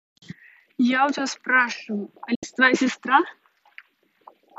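Speech, broken once by a digital broadcast dropout. At 2.35 s the sound fades out over about 8 ms and stays silent until 2.43 s. About 72 ms of audio is missing, which fits roughly three lost frames. The receiver stopped getting usable data, or the frames failed their checks. It muted rather than play them. When good frames returned, the sound resumed mid-stream. The audio sent during the gap is gone.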